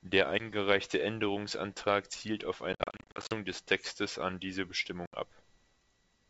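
Speech over a G.722 wideband link suffers packet loss on an ADPCM call: lost packets become silence and the decoder's predictor drifts from the sender's, leaving hard-edged holes: 10 ms at 0.39 s, scattered gaps from 2.73 to 3.34 s after "zielt auf", and 70 ms at 5.06 s after "an diese".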